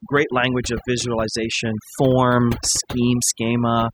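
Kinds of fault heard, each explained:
Overdone noise removal: aggressive suppression gates quiet frequency bands, leaving twinkling specks in near-silent pauses; spectrograms show patchy, isolated bins against black gaps.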